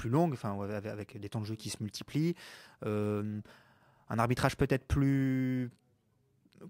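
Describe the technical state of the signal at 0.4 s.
Crude rate conversion is present at 0.4 s and throughout the speech. Repeated samples without filtering, consistent with a 32 kHz to 48 kHz step, leave an error roughly 30 dB down, heard as a gritty, inharmonic fizz riding on louder and brighter sounds.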